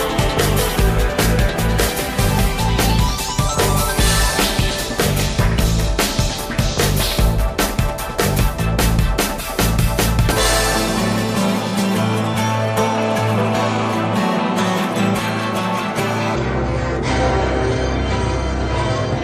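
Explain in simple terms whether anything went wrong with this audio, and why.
A section at the wrong speed runs from 16.35 s to the end of the clip at 19.24 s. There the audio plays at about 0.58 times its proper speed, so it drags and drops deep, close to ten semitones lower. Speed and pitch fall together, which points to playback on the wrong clock. The likely cause is an editor or player treating that stretch as if it had a different timing than the one it was recorded with.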